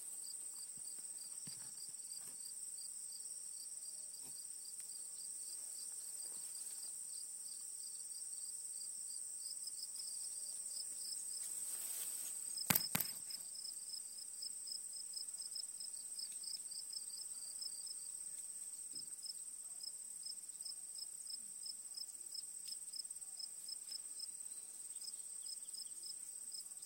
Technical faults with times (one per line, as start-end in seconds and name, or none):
10.01-18.85 doubled audio track